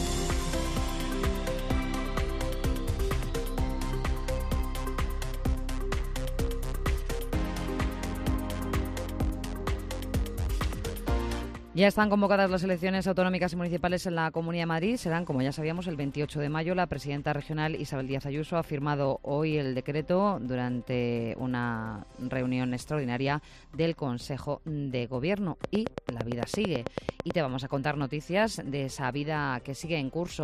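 Something, likely interference from nearby equipment or a faulty connection or power supply, injects a regular train of clicks from 25.64 to 27.32 s, about nine per second and roughly fifteen in all. Each sharp pulse stands around 20 dB above the surrounding sound, heard as a steady ticking.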